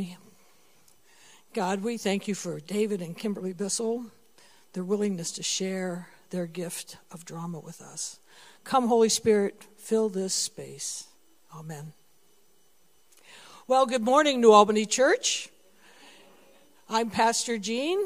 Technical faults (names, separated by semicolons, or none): none